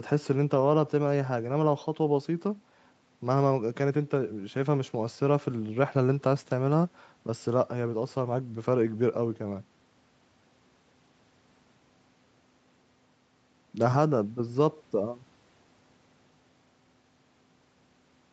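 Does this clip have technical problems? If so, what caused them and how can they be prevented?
No, there's nothing wrong here; it's speech that has simply come over a normal call connection, so the top end stops at about 8 kHz, just as you'd expect from that kind of call path.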